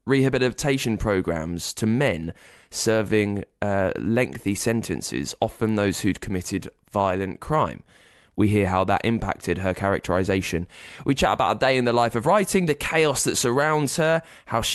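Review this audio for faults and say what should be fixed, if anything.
Nothing here needs fixing, since the speech comes through the call link without any fault that I can pick out.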